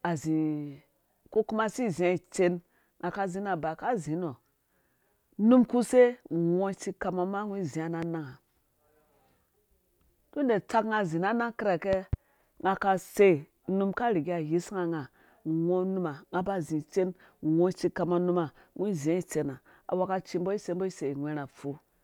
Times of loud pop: 8.02-8.05, 11.93-12.16

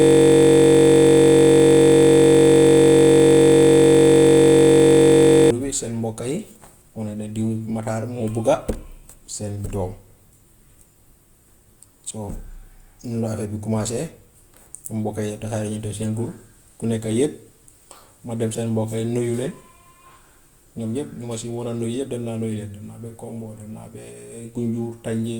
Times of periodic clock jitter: 15.26-18.90

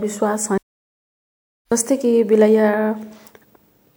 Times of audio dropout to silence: 0.58-1.72

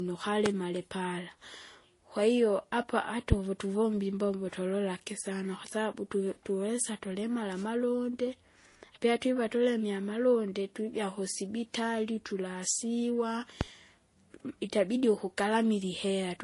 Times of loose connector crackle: none

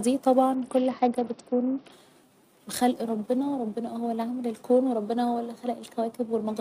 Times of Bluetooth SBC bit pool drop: 0.55-1.92

